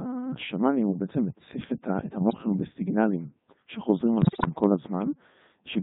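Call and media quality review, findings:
Codec 2 vocoder throughout: robotic, buzzy speech, waveform detail gone, heavy codec damage. Probable component: low-rate digital-radio vocoder, sound consistent with its 3.2 kbit/s mode. Mechanism: decoder rebuilds speech from sine waves using only pitch, voicing, energy and spectral envelope.

Bit errors on digital voice radio, 2.19–2.38 s and 4.22–4.53 s: sudden pitch jumps, level swings, warbles and garbled synthetic bleeps. Second burst longer and far more corrupted. Mechanism: flipped bits corrupt the vocoder's per-frame pitch, level, voicing and spectrum parameters.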